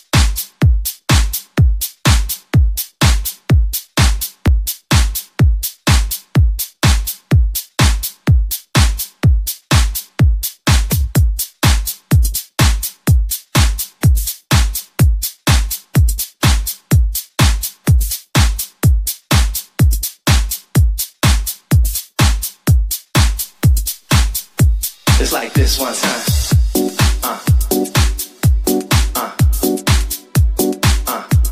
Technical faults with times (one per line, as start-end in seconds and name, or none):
23.35-27.14 low bit depth without dither